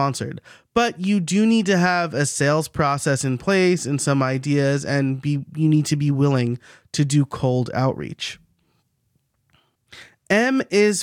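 Speech recording, no technical faults heard anywhere in it.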